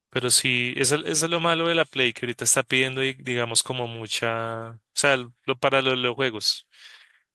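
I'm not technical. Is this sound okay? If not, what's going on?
Yes, it sounds fine: nothing in this recording jumps out as a problem, so there's nothing to worry about here.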